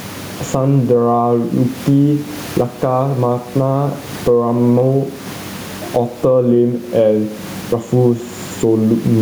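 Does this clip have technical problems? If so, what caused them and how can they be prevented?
Yes. Gain pumping runs throughout the speech. The room noise sits about 33 dB below the voice, and the gain swings by around 20 dB. This is likely caused by input gain set far too high, so a fast limiter or compressor clamps down on each loud sound and lets go in the gaps. Set the microphone gain so peaks sit well below clipping, and use gentle compression with slower release.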